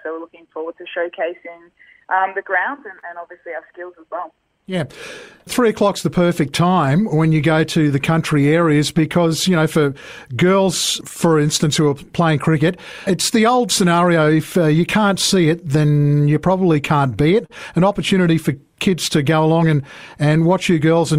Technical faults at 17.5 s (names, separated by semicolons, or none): clock drift between sender and receiver; repeated timing corrections; short stall from a late packet